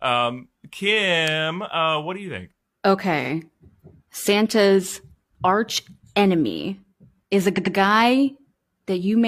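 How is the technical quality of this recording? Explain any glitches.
The recording has two stutters from repeated frames. At 3.21 s a 46 ms slice plays twice, which fits one compressed frame being duplicated. At 7.53 to 7.71 s, after "arch enemy is a", a 93 ms block plays three times. A waveform or spectrogram shows identical copies side by side.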